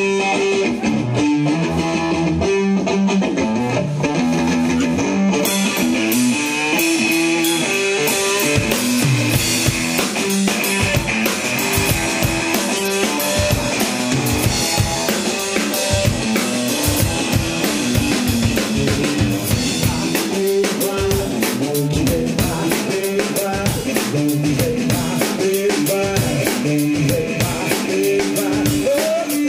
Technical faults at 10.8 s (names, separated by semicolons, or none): none